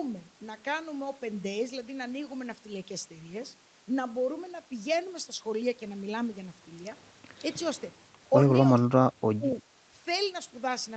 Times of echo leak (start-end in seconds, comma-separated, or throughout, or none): 9.50-9.62